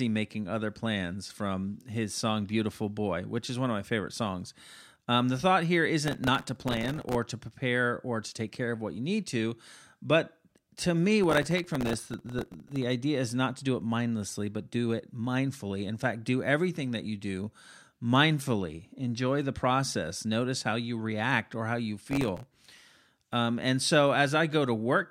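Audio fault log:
6.08–7.15 s, processor overload crackle: After "the thought here", gritty crackle tears across the speech until "to prepare or to". The processor misses dozens of tiny buffer deadlines in a row.
11.24–12.82 s, processor overload crackle: After "to me", the same tearing runs until "idea is not to". Each missed buffer replays a hard-edged scrap of old audio.
22.07–22.91 s, processor overload crackle: After "react or how you", a shorter burst. The buffers are very small, around a millisecond and a half.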